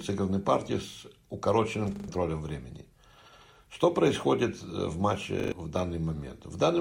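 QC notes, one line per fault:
1.96–2.08 s and 5.40–5.52 s, repeated buffer: new audio arrived late, so the same 40 ms piece played three extra times, with a hard join at each repeat. It is heard as a brief rattling stutter, and about a tenth of a second of audio is skipped each time.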